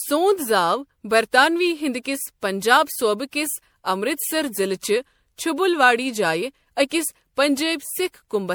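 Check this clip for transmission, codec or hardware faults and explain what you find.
There's one codec fault here, running through the whole speech clip: generation loss. It sounds swirly, smeared and hollow, more so than a single encode would leave it, with consonant attacks going soft. That texture fits MP3 at 96 kbit/s, likely decoded and re-encoded around five times. Each pass requantises on a shifted frame grid, so the noise and spectral holes stack up. The band still reaches 20.3 kHz, so it's the damage inside that range you hear.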